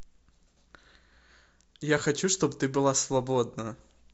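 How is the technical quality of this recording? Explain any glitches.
One glitch stands out in the speech. At about 3.59 s there's a corrupt frame decoded: flipped bits in a single compressed frame made the decoder put energy at wrong frequencies, giving a brief, quietish chirp, squeak, blip or burst of noise around -30 dBFS.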